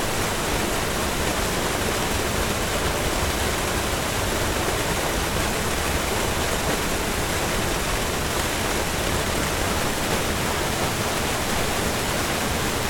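Buffer tearing from 9.65 s onward: under half of each period replays stale audio, giving a 172 Hz robotic buzz that fits a 256-sample buffer.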